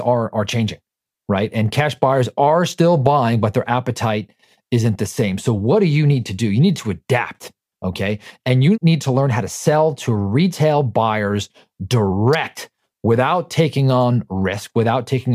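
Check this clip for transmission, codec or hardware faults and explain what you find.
One fault stands out: a single electrical switching spike at 12.33 s in the speech. It is a sharp snap or tight cluster of clicks laid over the sound, lasting about 16 ms and peaking around -15 dBFS. The likely cause is a nearby switch, motor or static discharge arcing briefly, with the audio line picking up that burst. On a waveform it shows as a narrow vertical spike. On a spectrogram it appears as a thin vertical stripe spanning the full frequency range.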